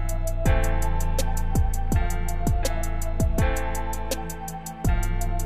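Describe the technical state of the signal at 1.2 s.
Nothing is wrong with the signal at 1.2 s: the audio there is intact, with no dropout, distortion or other fault.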